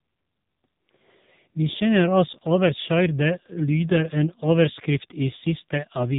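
AMR narrowband mobile codec damage runs from start to finish. The speech was squeezed through an 8 kHz-sampled vocal-tract model, so nothing above 4 kHz survives. The heavy buzzy, synthetic quality fits one of the codec's lower modes, around 6.7 kbps.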